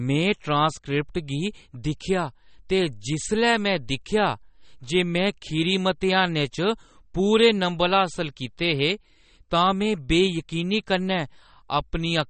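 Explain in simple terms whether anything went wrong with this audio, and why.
MP3 compression damage runs through the whole recording, from start to finish. The speech sounds dull and watery; it is dull because nothing is left above about 8.4 kHz, so the crisp top of s and t sounds is missing. The likely cause is saving the file at a low quality setting: the encoder had too little room, so it discarded the treble and the quieter details it judged least important.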